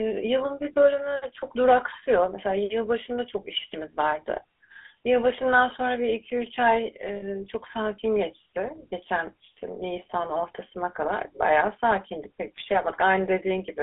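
Speech coded throughout with the GSM full-rate codec, its roughness and narrow 300 Hz to 3.4 kHz band consistent with a 13 kbps stream, gives the voice a plainly audible buzzy, gravelly texture with nothing above 3.4 kHz. At 7.16 s, lost GSM frames were concealed by repeating the last good frame's settings, which fits about 60 ms of lost data across three frames, leaving a rough metallic ring that lasts until about 7.46 s.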